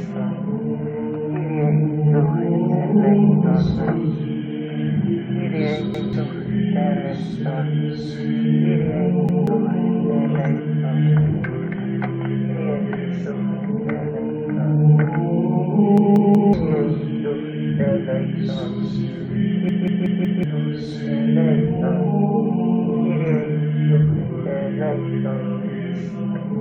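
Repeated buffer faults occur four times, each time because the output device ran short of fresh audio and replayed its last block of about 0.19 s, a length that fits an 8192-sample buffer. At 5.94 s and 9.29 s one block sounds twice, a brief stutter with a hard join. At 15.98 s it loops four times, and at 19.69 s five times, becoming a stuck, chattering repeat. These gaps drop roughly a fifth, a fifth, half and most of a second of sound.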